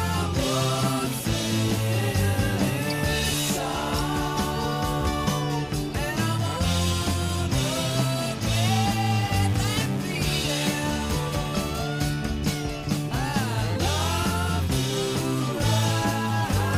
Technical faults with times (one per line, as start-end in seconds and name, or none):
none